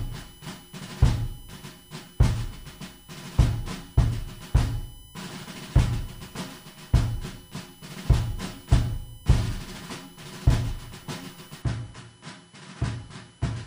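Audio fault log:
Throughout: USB whine, a fixed 1 kHz tone from the bus's 1 ms frame current leaking into the audio ground, strongest at its 3 kHz harmonic, about 30 dB below the signal.
11.62 s to the end: input switched to a poorer device, likely cause of an abrupt, gapless change where content above 10.5 kHz vanishes, level drops about 10 dB, and new background noise appears about 30 dB down.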